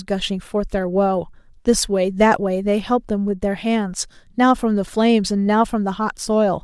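From 0.22 to 6.34 s, faint clock slip clicks tick roughly every 0.7 s, likely one sample slipping each time as two unlocked clocks drift apart.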